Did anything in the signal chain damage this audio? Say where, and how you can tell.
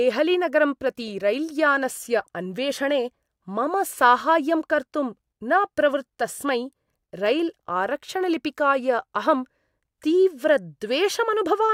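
No, nothing in this speech recording points to damage at any stage of the signal chain. There is no moment in it that I would flag or trace back to a stage.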